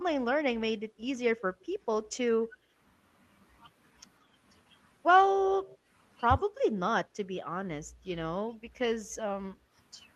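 From 0.88 to 0.99 s, and again from 9.6 to 9.65 s, the background is gated by the echo canceller. The room tone dips, by about 8 dB and then about 7 dB.

At 2.45 to 2.57 s and 5.34 to 5.51 s, the speech itself dips by about 10 dB. This is speech suppressed in double talk, likely because the canceller mistook overlapping talk for echo. It differs from the gating because the talker's own level drops, not just the room.

From 5.63 to 5.78 s comes an echo leak: a faint, delayed copy trails the speech by 156 ms, about 25 dB down. It is likely residual loudspeaker pickup, and it sounds added rather than removed.

The double-talk suppression returns at 6.45 to 7.32 s, with the deepest cut at about 25 dB, and at 7.9 to 9.15 s, at about 15 dB.

Throughout, the Opus call path limits the audio to about 12 kHz.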